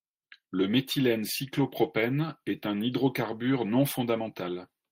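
No technical faults can be heard anywhere in the speech.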